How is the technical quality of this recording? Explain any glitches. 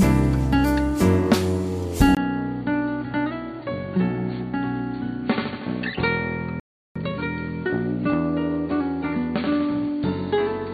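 The recording has three faults: a drop in fidelity from 2.15 s onward, a gap near 6.6 s, and a hurried stretch right after it.

From 2.15 s to the end, the audio turns dull and boxy. This is most likely an input switched to a poorer device. A 20 ms silence marks the changeover. After it, the band is narrower, which fits a narrowband headset or secondary microphone. The level drops by about 5 dB, and a new noise floor appears roughly 55 dB below the signal. This is the new device's own self-noise and character.

From 6.60 s to 6.96 s, the output goes silent for 357 ms. This playback stall is likely the player running out of buffered data, or its audio thread being blocked, so nothing reached the output until it recovered. The sound cuts off mid-flow, and when it returns it does not pick up at a later point, which indicates the missing stretch was held rather than dropped.

From 6.96 s to 7.30 s, the audio runs at 2× speed while the pitch stays normal. 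This is time-compressed catch-up. To clear the backlog left by the stall, the player removes short segments and cross-fades the remainder together, so it regains real-time position without shifting pitch. The result sounds rushed.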